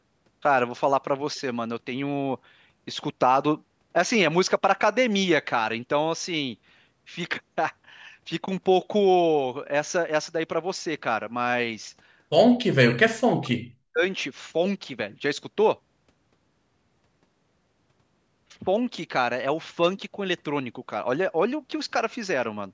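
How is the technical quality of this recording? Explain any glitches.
One clear glitch affects the speech. The call microphone processing passes nothing above 8 kHz, which is normal for a call.

From 12.64 to 14.04 s the voice drops sharply, nearly to silence at its deepest. The likely cause is speech suppressed in double talk. Both ends spoke at once. The echo canceller could not tell the local talker from loudspeaker echo, so it turned both down.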